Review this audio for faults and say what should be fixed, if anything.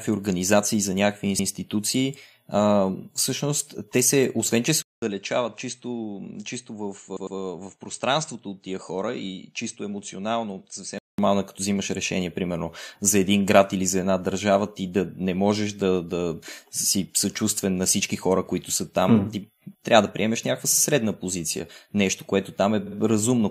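Repeated frames occur at 1.39 to 1.49 s, 7.16 to 7.37 s, 20.72 to 20.82 s and 22.86 to 22.96 s. At each point a short block of compressed audio plays again, heard as a stutter. At 1.39 s a 104.5 ms block plays twice. At 7.16 s the same-sized block plays three times, adding 209 ms. At 20.72 s and 22.86 s a 52.2 ms block plays three times, adding 104.5 ms each. Writing or sending each encoded frame exactly once, with sequence checks that drop duplicates, prevents this.

Input switched to a poorer device from 4.82 to 11.18 s. A 200 ms silence marks the change. The speech then turns dull and boxy, with nothing above 8.4 kHz, a level drop of around 10 dB and a faint new background noise far below the speech. It clears again at 11.18 s. The likely cause is the recording input jumping to another microphone or a headset call profile and back. Locking the input device for the whole session, and disabling automatic switching, prevents this.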